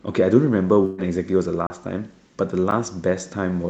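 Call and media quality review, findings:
Burst of packet loss, 0.85 to 1.00 s. Consecutive packets lost or late, so the jitter buffer's concealment extends the last received sound for about 126 ms while lowering its level. Result: a held, decaying buzz or hiss in place of the speech. About 120 ms of the original never arrives, so the speech resumes further on with that stretch skipped, an audible jump. Concealment is heard through the Opus path, band-limited at 8 kHz.

Block of digital silence, 1.67 to 1.70 s and 2.71 s. Output buffer not filled in time, probably a playback scheduling underrun, so blocks of samples go out as zeros. First hole about 33 ms: a hard cut to dead silence and back with no fade, heard as a short gap. Second about 9 ms: too brief to register as a gap, heard as a tick or dip.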